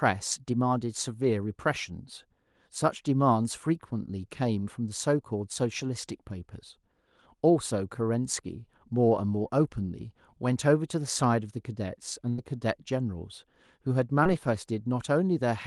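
A burst of packet loss runs from 12.29 to 12.40 s. Around 80 ms of the speech stream failed to arrive in time, and the receiver covered roughly 84 ms by stretching the last decoded sound forward while lowering its level, which comes out as a held buzz or fading hiss before the speech picks up again with that stretch gone. The call path here sounds like Opus, with the top end stopping near 12 kHz.

A short concealed packet loss follows from 14.24 to 14.27 s. About 20 ms of audio never reached the decoder, so the receiver improvised around 15 ms by extending the preceding sound, pitched if voiced or as shaped noise if not, and then crossfaded back to the real signal. The patch is heard as a quick smear or wobble rather than a clear gap.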